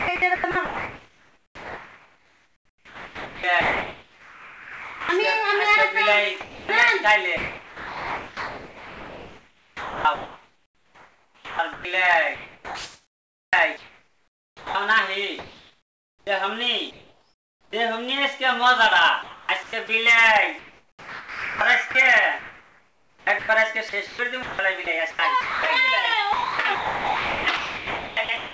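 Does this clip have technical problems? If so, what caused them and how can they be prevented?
Yes. Sound chopped by the voice detector, likely, from 0 to 5.09 s, 6.41 to 17.73 s and 19.23 to 28.53 s. Comfort noise fills roughly 4.5, 8.4 and 4.8 s. Prevent it by loosening or disabling sender-side voice detection.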